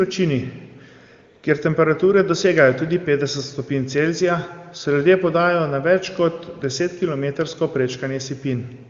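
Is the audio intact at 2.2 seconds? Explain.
Yes, the audio is intact at 2.2 seconds, with no fault at that moment.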